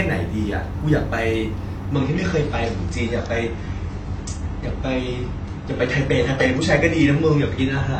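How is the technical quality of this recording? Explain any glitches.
The recording starts clean but loses quality partway through. From 1.94 s to the end, the speech turns dull and swirly, with nothing above 8.6 kHz. This is an adaptive stream at a lower bitrate: a slowing connection switched playback to a leaner encode, which fits a drop to around 24 kbit/s.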